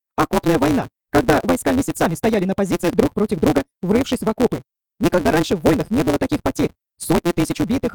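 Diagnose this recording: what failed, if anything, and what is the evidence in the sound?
A block size mismatch (truncated) at the driver or buffer stage runs through the whole recording. A steady buzz at 172 Hz sits under the sound from start to finish, and everything plays about 1.88 times faster than normal while the pitch stays roughly where it should be. The buzz rate fits a reader taking 256-sample blocks. The upstream stage writes longer blocks, and the tail of each one is discarded. That produces a discontinuity at every block boundary and removes audio, which is why the recording runs fast.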